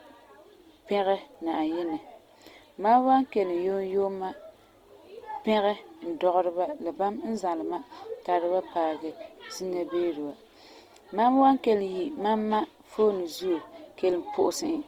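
Speech with plainly audible Opus compression throughout: a grainy, rough texture where starved bands are noise-filled, likely a CELT-mode encode near 24 kbps, with nothing above 20.3 kHz.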